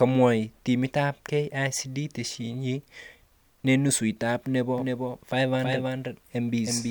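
Speech, with a doubled audio track from 4.77 s, after "nenusu nebo", to the end. An abrupt, full-band copy about 5 dB quieter trails by roughly 300 ms, showing as duplicated, offset spectrogram and waveform shapes, likely from a second, slower capture path.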